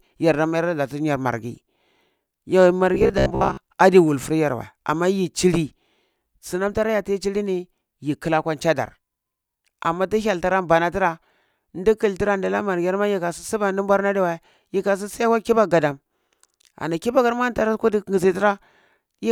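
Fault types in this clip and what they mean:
Robotic sound from repeated short buffers: from 2.95 to 3.58 s, just before "adi wulfur yar wei", the speech turns into a rigid metallic buzz pitched at 66.7 Hz. The likely cause is playback repeating a 15 ms slice for about half that stretch, skipping real audio.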